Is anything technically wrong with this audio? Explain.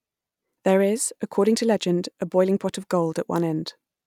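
No, nothing technically wrong stood out on listening to this speech clip.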